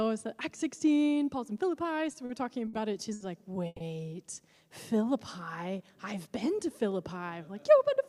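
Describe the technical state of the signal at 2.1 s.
A packet arrived late and the jitter buffer ran dry, causing a short stall from a late packet between 2.11 and 2.15 s. The receiver stretched the last sound by 20 ms, then resumed where it paused, holding it slightly too long with a faint buzz or dip.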